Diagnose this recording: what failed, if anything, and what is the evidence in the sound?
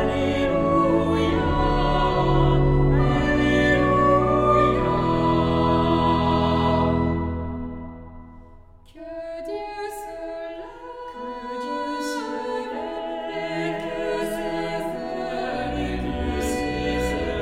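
Nothing failed: no stage from the analogue wiring through capture, processing, transmission, storage or playback shows a fault anywhere in the sound. The recording holds steady throughout, with nothing in it that points to a broken link in the chain.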